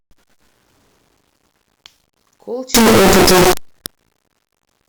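Speech clip whose sound, from 2.74 s to the end, turns into very loud, harsh distortion with quiet moments as loud as the rest. The likely cause is signed and unsigned mixed up on the 8-bit samples, which flips every zero crossing into a full-range jump.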